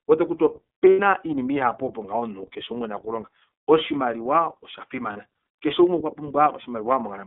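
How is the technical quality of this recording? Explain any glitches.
The quality is limited: it's narrowband speech with clearly audible codec coloration, plus two short dropouts.

Throughout, you're hearing the iLBC codec. The line band runs only from 200 Hz to about 3.6 kHz, so there's no air or sibilance on top and things sound boxed-in. iLBC codes each frame's excitation on its own, and the rough, slightly synthetic edge here is plainly audible. The character fits the 13.33 kbps mode with 30 ms frames.

There are two lost iLBC frame events, at 0.90 to 1.00 s (90 ms, which sounds like three 30 ms frames) and at 5.13 to 5.17 s (30 ms, one frame). When the packets went missing, the decoder filled the gaps by repeating the last pitch cycle mixed with noise. You get a brief held, buzzy vowel where the speech should move on. Since the frames stand alone, the speech snaps back right after each gap.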